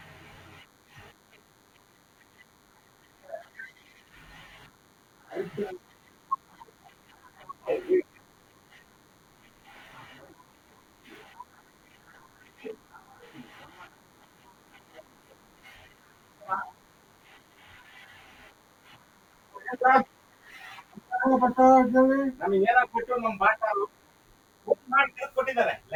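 A DECT cordless phone buzz runs under the speech for the whole clip: a nearby handset or base station sending radio bursts 100 times a second, rectified by the audio circuit into a thin, steady 100 Hz buzz with many harmonics, sitting well below the speech, roughly 40 dB down.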